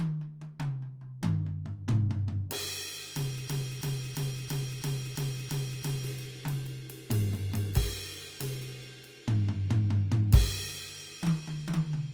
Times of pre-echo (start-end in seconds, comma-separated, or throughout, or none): none